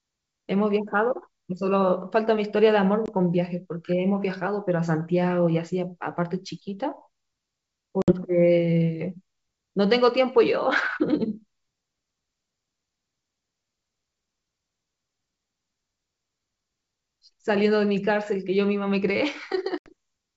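Speech over what sounds like a G.722 wideband call, clear up to about 7 kHz, with packet loss on an ADPCM call hitting three times: around 3.06 to 3.10 s (a 20 ms gap, about one packet), 8.02 to 8.12 s (60 ms, a few packets), and 19.78 to 19.93 s (80 ms, a handful). Each is a hard-edged drop to silence, then the decoder's predictor and step size are out of sync with the sender's, so the audio comes back slightly distorted and settles over the next few tens of milliseconds.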